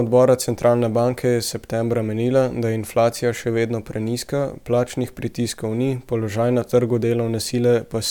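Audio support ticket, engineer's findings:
No faults found on this speech clip.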